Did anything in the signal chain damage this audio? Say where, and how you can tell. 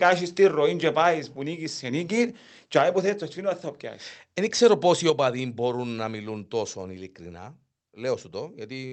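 Yes. Between 2.76 and 2.81 s, right after "νίκεις σε νίκη και", the loudest peaks turn harsh and crackly, with their tops flattened. This is microphone overload at the converter stage: the peaks drive about 3 dB past full scale, and the converter cuts off a small share of samples at its limit. The likely cause is a microphone input gain set too high, so the analogue signal exceeded what the converter could represent.

At 5.10 s, just before "μπορούν να μιλούν τόσο", speech and background noise both drop by about 5 dB in a single step, with no ramp. That is a microphone volume stepped down in the call-processing stage. Because the noise floor falls along with the speech, the gain changed at the device input, not in the talker. The likely cause is the call software's automatic gain control reacting to the earlier overload; the Opus path then carries the lower level, with its band limit near 8 kHz.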